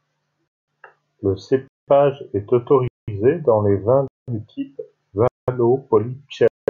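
Speech delivered in 1.0 s chunks with 200 ms of silence left at every join, a gap between chunks. Nothing is lost, but the sound drops out with hard edges at 0.48, 1.68, 2.88, 4.08, 5.28 and 6.48 s. "dans les vins" falls between the third and fourth holes.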